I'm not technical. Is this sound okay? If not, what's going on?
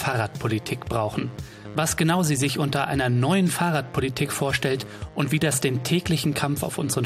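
Yes, no faults heard.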